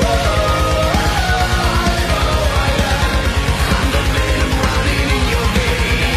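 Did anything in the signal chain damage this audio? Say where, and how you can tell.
Yes. At the network and codec stage, an adaptive stream at a lower bitrate takes over at 2.53 s and runs to the end. The switch is abrupt, with no gap. The treble turns thin, and codec artefacts thicken. On a spectrogram, content stops sharply at 14.9 kHz from that point, and the upper band looks smeared and patterned. This fits a throughput dip forcing the player onto a rendition near 20 kbit/s, likely HE-AAC.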